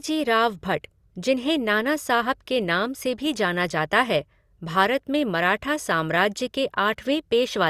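No audible technical faults.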